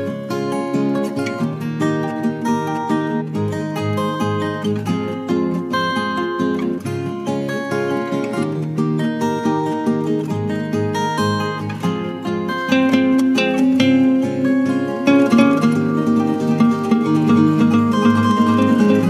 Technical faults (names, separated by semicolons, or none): doubled audio track